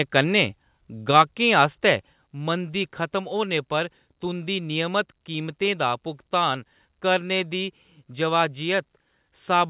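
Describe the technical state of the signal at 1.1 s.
At 1.11 s the level drops by about 2 dB in one step, most likely a microphone volume step-down where the call software trimmed an input it judged too hot. Then from 1.16 to 1.21 s, just before "आस्तै मंदी खतम होने", peaks overshoot by about 2 dB and a few percent of samples get flattened, likely microphone overload, so you hear a harsh, crackly edge, all within the G.711 call band that stops at 4 kHz.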